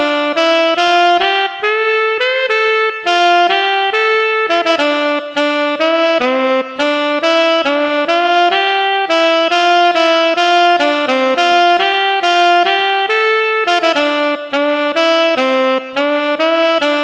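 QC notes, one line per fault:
Throughout, clock drift between sender and receiver: the sender's audio clock runs roughly 5% slower than the receiver's, so the jitter buffer keeps draining faster than it is refilled. The receiver has to keep stretching what it has to avoid running dry, and the timing never settles. The result is a faint, recurring unsteadiness across the whole clip rather than one clear event, with small hiccups arriving at uneven intervals.
0.06 to 16.97 s, repeated timing corrections: to stay in step with the slow sender, the receiver repeatedly inserts short repeated pieces, all lengthening the audio and together adding about half a second. Playback effectively runs at about 97% speed. Each insertion is tiny, so the sound stays intact, but the pacing drags slightly and wobbles, with occasional soft stutters where a piece is doubled.
0.87 to 7.91 s and 9.44 to 14.05 s, scattered short gaps: packets arrived late or went missing one at a time, about twenty in the first stretch and about fifteen in the second. 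The receiver filled each hole by extending the preceding sound, no more than about 15 ms at a time. It patched roughly 2% of each stretch. The fills come across as brief ticks and small smears dotted through the audio, with no audible dropouts.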